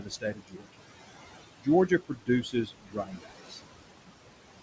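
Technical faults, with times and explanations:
Throughout, noise suppressor artifacts: the suppressor pulls the room noise down by about 20 dB between words, so the background sinks between words and rises under the speech.
0.00–0.86 s, 1.59–1.68 s, 1.88–3.60 s, speech cut by the noise suppressor: it mistook quiet speech for noise and ducked it by up to about 21 dB. That's roughly half a second, a tenth of a second and a full second of faint, swallowed sound.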